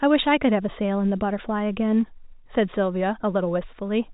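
Nothing goes wrong in this speech recording, and the only thing worth noting is the ordinary telephone-band sound of G.711 coding, with nothing above about 3.8 kHz.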